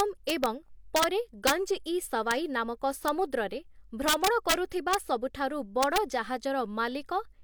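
Violent, sharp cracks break through the loudest speech peaks at 0.00–0.46 s, 0.96–1.04 s, 1.47–1.51 s, 2.31 s, 3.08 s, 4.08–4.54 s, 4.93 s and 5.83–5.98 s, harsher than ordinary clipping. This is integer overflow. The signal was pushed up to about 6 dB past the largest representable integer, worst at 1.47 s and 4.08 s. Each overshooting sample wrapped round to the opposite extreme instead of being held at the limit.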